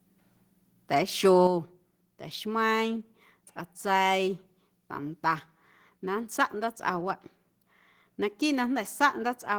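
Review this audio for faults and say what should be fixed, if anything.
At 1.47 s the whole speech signal, voice and background together, steps down by about 6 dB in one go and stays there. That's the microphone volume stepped down: the level doesn't fade, it just drops at a single instant, which is what you hear when the input gain on the device gets changed rather than when someone moves away from the mic. The likely cause is the call software deciding the input was too hot and cutting the device volume. To prevent it, turn off automatic microphone gain adjustment in the call app and set the input level manually with some headroom.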